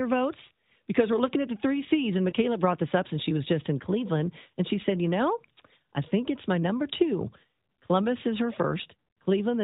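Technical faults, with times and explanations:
2.30 to 2.33 s, lost AMR speech frame: a quick dip just before "brought this up since", sounding like one 20 ms frame gone. Radio errors failed its checksum, so the decoder bridged the gap by repeating the last good pitch and vocal tract settings at lower gain.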